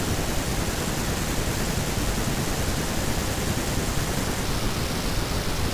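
From 4.44 s to the end at 5.74 s, the voice suddenly drops low and drags, running at about 0.73 of its proper speed with the pitch sunk by roughly 5.5 semitones, so it sounds heavy and slowed. This is a wrong sample rate fault: the samples are played back more slowly than they were captured, with no conversion, so speed and pitch fall together. The ratio fits 44.1 kHz audio played at 32 kHz.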